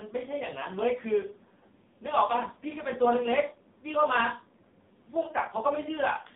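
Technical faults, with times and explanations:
Throughout: AMR narrowband mobile codec. Speech is confined to 150 Hz to 3.7 kHz, a flat spectrogram ceiling, and sounds heavily buzzy and synthetic, which fits a very low 5.9 kbps mode.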